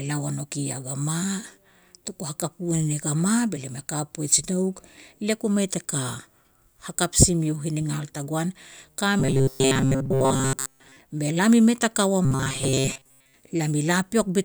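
From 9.2 to 11.0 s, and again from 12.25 to 13.34 s just after "mei ta ka ua", the speech turns into robotic sound from repeated short buffers: a rigid metallic buzz at 133 Hz. Most of the audio in these spans was likely replaced by repeats of a roughly 7.5 ms buffer.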